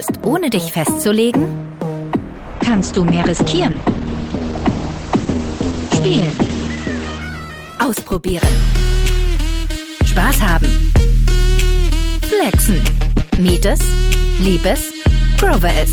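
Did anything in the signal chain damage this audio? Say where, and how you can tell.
Yes. From 2.57 s to 9.25 s there is a call bitrate drop, at the codec stage, driven by the call's bandwidth estimate. The top end collapses from about 20 kHz to a cut-off near 8 kHz, and the sound turns coarse and watery, bottoming out for about 4.1 s. That fits an encoder pushed from roughly 48 kbps down to around 10 kbps. Packet loss would cause gaps or concealment glitches, and a fixed low-pass filter wouldn't add coarseness or recover, but here the full band returns once the bitrate does.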